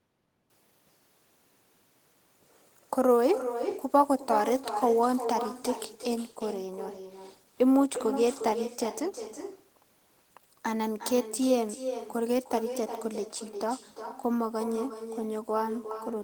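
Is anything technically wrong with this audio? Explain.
Yes. Throughout the speech, every phrase is trailed by a fainter, thinner copy of itself arriving roughly four tenths of a second later, sitting about 10 dB below the direct sound. This is echo with no canceller: the far end is playing the call through a loudspeaker, its microphone picks that playback up, and nothing subtracts it, so the talker's own voice returns after the network round trip.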